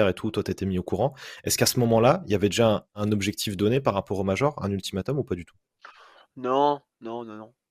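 No audible fault turns up anywhere in the recording.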